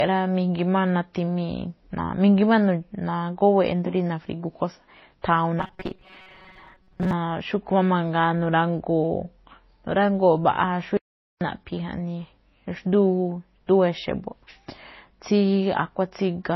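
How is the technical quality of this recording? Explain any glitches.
The technical quality is poor. Three faults are audible.

Throughout the speech, the artefacts of two codecs are heard together. This is likely transcoding between lossy codecs. The artefacts point to a low-bitrate MP3 re-encoded as low-bitrate Vorbis. The second codec wasted bits on the first codec's damage and added its own.

From 5.60 to 7.13 s, the speech turns into robotic sound from repeated short buffers. A rigid metallic buzz sits at 188 Hz. It likely comes from repeating a segment of about 5.3 ms while fresh audio arrived late. About half the sound was replaced.

From 10.97 to 11.41 s, there is an audio dropout to silence lasting 0.44 s. The speech cuts to silence with no room tone. Then it resumes mid-flow. The input was likely lost briefly while silence was recorded.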